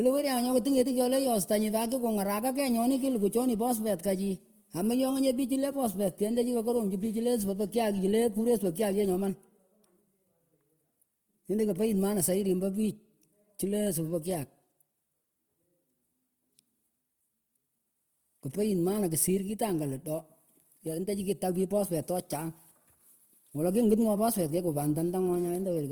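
Throughout the recording, the speech has likely passed through Opus compression in its music-oriented CELT mode, at a rate that fits roughly 24 kbps. The encoder keeps each band's energy but lacks the bits to code the detail, so it fills bands with folded or noise-like content. The damage is plainly audible: the speech sounds rough and grainy rather than swirly. The full bandwidth is kept, with content reaching up to about 20.2 kHz.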